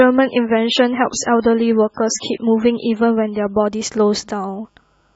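From 0.0 to 3.66 s, an adaptive stream starting at a low bitrate: treble is missing and artefacts swirl, fitting roughly 16 kbit/s MP3, then jumps gaplessly to 128 kbit/s MP3; the spectrogram's top edge rises abruptly.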